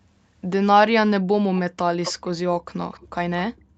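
From 2.03 to 2.27 s a delayed copy of the speech returns about 259 ms behind the original, roughly 10 dB below it. This is an echo leak, likely from a far-end loudspeaker whose echo canceller let residual pickup through. It recurs at 2.92 to 3.08 s, weaker at about 25 dB down, and at 3.57 to 3.61 s as a faint scrap around 40 dB down. Each time it is a delayed repeat of the same voice.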